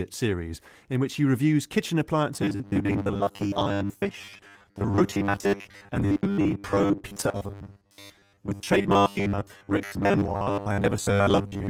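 From 2.34 s to the end, the speech becomes a rigid metallic buzz locked at 100 Hz that loosely follows the words. This is robotic sound from repeated short buffers, likely caused by audio arriving too seldom, so the last 10 ms is looped while most of the real signal is skipped.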